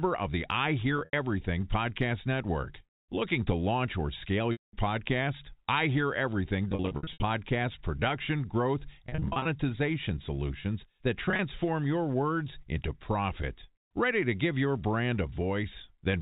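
Packets dropped out of the stream five times, and the receiver bridged each gap by repeating the last pitch period, which gives the packet loss with pitch repetition heard here over the band-limited G.711 telephone sound. At 0.97 s, 110 ms went missing across 160 ms. At 4.52 s, a solid 210 ms run was lost, long enough to fade toward silence before speech returns through a cross-fade. From 6.70 to 7.22 s, ending just before "production growth", 320 ms was lost in scattered bursts of up to 70 ms. From 9.09 to 9.45 s, right after "production growth", 240 ms was lost in bursts of up to 40 ms. At 11.25 s, between "solutions that" and "your words into profit", 90 ms was lost in bursts of up to 30 ms. The scattered gaps come across as brief held, buzzy fragments.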